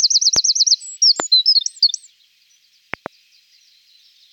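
A sudden voltage step or pulse, likely from a plug, switch, static discharge or driver glitch, has been added to the signal, causing a loud pop at 0.36 to 0.38 s, a stronger one at 1.20 to 1.22 s, and a quick double pop from 2.94 to 3.08 s. Each pop stands roughly 10 to 15 dB above the surrounding sound, which continues underneath.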